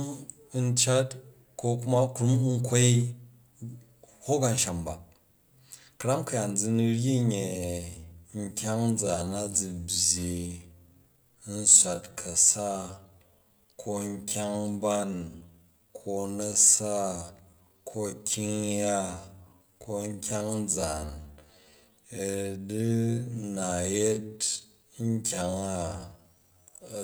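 Speech in which a time-stretched section runs from 7.30 s to the end at 27.04 s: the pace abruptly drops to about 0.6 times normal speed while pitch holds steady, leaving the speech dragging. The likely cause is software lengthening the audio by repeating short slices to fit a target duration. On a spectrogram, harmonics stay level but onsets blur and stretch; the waveform shows drawn-out envelopes with repeated grain patterns.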